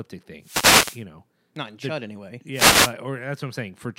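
Speech, with two wireless microphone noise hits, from 0.40 to 1.04 s and from 2.52 to 2.95 s. Each is a brief swish of static over the voice. The radio link fades as reflected signals cancel, so receiver noise rises and masks the sound.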